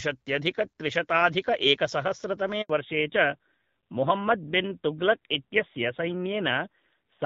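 At 2.62 s the speech stops for 80 ms, ending at 2.70 s. This is a handover gap: the call was passed between networks, and no speech frames arrived while the new link came up. The sound fades out over a few tens of milliseconds rather than cutting off, then there is flat silence until audio resumes. Whatever was spoken in those 80 ms is simply missing.

From 2.70 s to the end of the clip there is a fallback to narrowband. Before the gap the audio has the open top end of wideband coding, with only light coding roughness, consistent with AMR-WB around 12.65 kbit/s. Afterwards nothing remains above 4 kHz. The speech sounds duller and boxier, sibilants lose their crispness, and a rougher, grainier texture appears, which fits a switch to AMR-NB at about 7.4 kbit/s.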